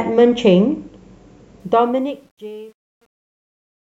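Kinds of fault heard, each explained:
Truncation distortion on a fade: The speech fades out from about 1.6 s. From 1.6 s the fade keeps too few bits and has no dither, which fits a 10-bit word. The waveform collapses into coarse steps. From 2.28 s to the end, the quiet tail turns gritty.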